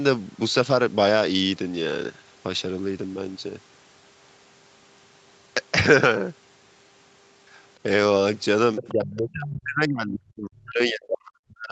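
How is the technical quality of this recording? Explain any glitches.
The quality holds up until near the end, where two call-related problems hit at once. The speech comes through a call chain with nothing above 8 kHz, which fits a wideband Opus setting.

At 8.76 to 8.93 s there's a brief scrap of the other side's voice leaking through, sitting roughly 15 dB under the main talker. The likely cause is the far end playing out of a loudspeaker and the echo canceller not fully scrubbing it from the mic. It's short, so you hear it as a faint blip of a second voice.

From 8.81 s right through to the end of the clip the talker gets pushed down hard, dipping by as much as about 40 dB at the deepest point. That's speech suppressed in double talk: with both sides going at once, the canceller likely couldn't tell the near talker from the echo and clamped down on everything. The speech sounds choked off and patchy, fading in and out instead of staying steady.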